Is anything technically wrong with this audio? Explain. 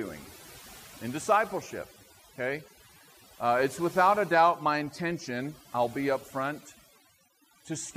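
Yes. From start to finish the background has collapsed into near silence dotted with twinkling specks. This is overdone noise removal: a noise reduction process set far too aggressively has pushed individual frequency bands down or off whenever their level came close to its noise estimate. Quieter parts of the speech sat near that threshold too, so they were stripped away along with the noise.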